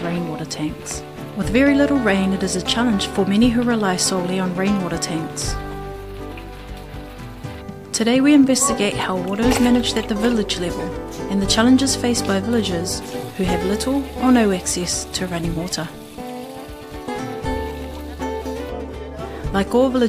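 No technical faults can be heard anywhere in the recording. Nothing interrupts or disturbs the audio at any point.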